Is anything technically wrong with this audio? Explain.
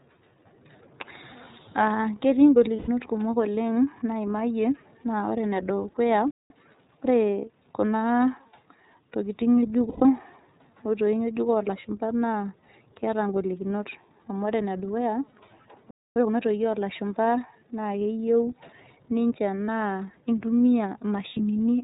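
Yes. The speech has passed through the iLBC codec throughout, and it shows plainly. The bitrate of about 13.3 kbps fits 30 ms frames, and each frame's excitation is coded on its own. The codec also keeps the band narrow, so nothing above 4 kHz survives. The result is a voice that stays intelligible but sounds thin, slightly rough and synthetic from start to finish.

Lost iLBC frames occur five times. Gaps of about 120 ms occur at 2.76 to 2.89 s and 9.89 to 10.05 s, and single 30 ms losses occur at 15.30, 19.66 and 21.32 s. Each time, the decoder covers the missing packets by repeating the last pitch cycle blended with noise. The longer gaps fade as they go. Each one sounds like a held, faintly buzzy or breathy vowel. Because each frame decodes independently, the voice snaps back almost immediately afterward.

Playback stalls cut the sound to silence for about 190 ms at 6.31 to 6.50 s and about 250 ms at 15.91 to 16.16 s. 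The output stops in mid-flow, likely because the player ran dry of data or its thread was blocked, and it resumes once it recovers.

Time-compressed catch-up follows each stall, from 6.50 to 6.68 s and from 16.16 to 16.40 s. To work off the backlog, the player removes small slices and cross-fades the joins, running at 2x speed. The speech sounds rushed but keeps its normal pitch.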